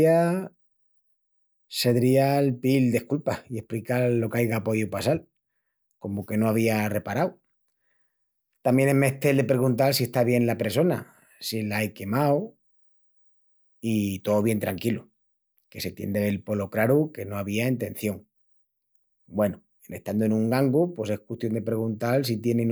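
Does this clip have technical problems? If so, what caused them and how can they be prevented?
No, there are no technical problems in this speech clip. There is nothing here to trace to a cause or to prevent.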